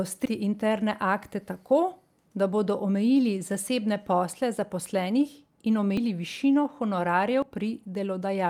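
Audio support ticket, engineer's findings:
Forward jumps in speech at 0.26, 5.97, 7.42 s, skipping roughly 150 ms, then about 100 ms twice. Likely dropped buffer (overrun): capture overwritten before read, ends spliced. No silent gap, unlike an underrun dropout.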